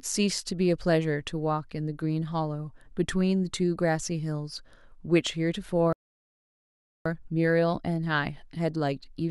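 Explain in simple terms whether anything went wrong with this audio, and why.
At 5.93 s the speech suddenly cuts out and the audio goes silent for about 1.1 seconds, until 7.06 s, when it picks up again. This gap is a playback stall. The talking stops in mid-flow rather than at a natural pause. The likely cause is that the player ran out of incoming audio, or was briefly held up doing something else, so it had nothing to play until it recovered.

From 7.06 s to the end at 9.30 s, the speech sounds hurried, about 1.15 times normal speed, yet the pitch stays natural. This is time-compressed catch-up. Having fallen behind during the gap, the player trims tiny slices out of the audio and blends the joins together, so it can get back on schedule without making the voice sound higher.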